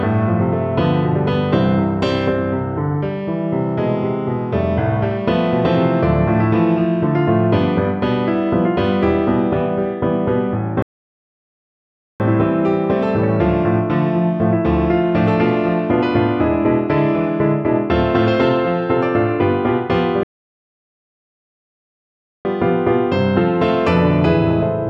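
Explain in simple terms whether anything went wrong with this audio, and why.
The playback hit two rebuffering stalls. The sound stops at 10.82 s and resumes at 12.20 s, then stops again from 20.23 s to 22.45 s. The player ran out of downloaded audio and waited. Each time it picks up exactly where it left off, adding about 1.4 s and 2.2 s of silence.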